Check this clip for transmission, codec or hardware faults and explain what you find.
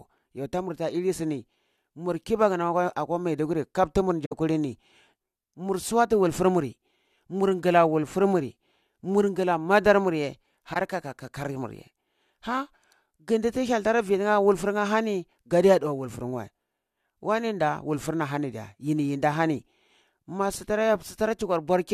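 Two short corrupt frame concealed events turn up in the speech, at 4.25 to 4.33 s right after "akwa maiduguri kap tumar", and at 10.72 to 10.77 s just after "madar muye". In each, damaged AAC data got caught by the decoder, which papered over it instead of playing garbage. The concealed stretch lasts roughly 80 ms the first time, which fits about three frames, and about 45 ms the second, which fits about two.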